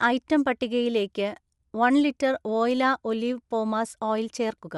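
Throughout, the speech carries a plainly grainy, breathy edge, likely from Bluetooth LC3 compression; a spectrogram shows blocky, noise-textured upper frequencies in short, evenly spaced frames.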